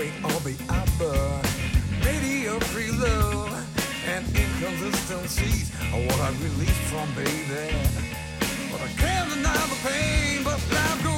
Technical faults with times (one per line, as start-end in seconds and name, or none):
none